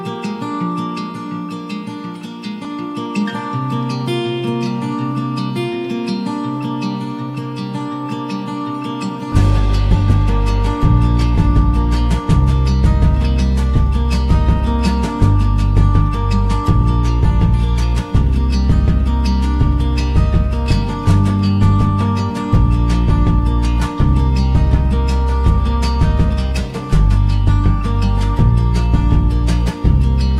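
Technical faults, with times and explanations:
Nothing here to flag; the whole thing holds together without a single technical slip anywhere along the way.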